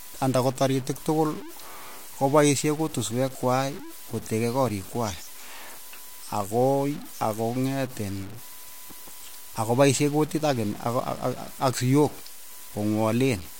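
A speech recording carries grainy distortion from start to finish, most likely from low bit depth without dither. The error sits roughly 20 dB below the signal, which fits a 6-bit word truncated rather than rounded. What separates it from steady hiss is that the grit tracks the speech: it roughens quiet syllables, sputters on decaying tails, and vanishes into silence in pauses instead of leaving a constant noise floor underneath.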